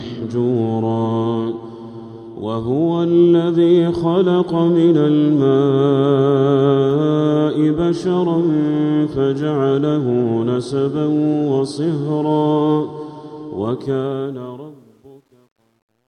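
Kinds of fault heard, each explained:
Truncation distortion on a fade: from 13.78 s the fade-out turns gritty, and the roughness is worst from 14.75 s to the end of the clip, where the level is lowest. A digital gain stage is discarding the fine low-order detail without adding dither. As the signal shrinks toward the smallest step, it is rebuilt from only a few square steps, which fits a path keeping about 10 bits.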